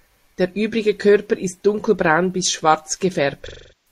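AAC frame loss with concealment starts at 3.48 s, right after "ist dunkelbraun bis schwarz", and runs to the end of the clip. About 0.38 s of coded audio is missing, which fits a run of roughly nine frames. The decoder keeps rebuilding sound from the last good spectrum, so the speech turns into a smeared, noisy wash that decays toward silence.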